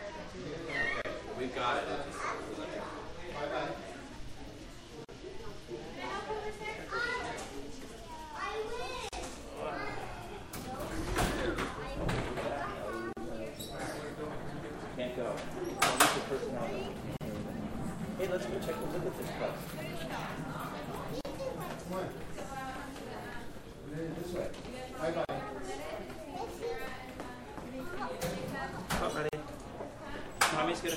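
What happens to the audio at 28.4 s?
Nothing goes wrong at 28.4 s: the sound carries on intact through that moment, with no dropout, click or distortion to be heard.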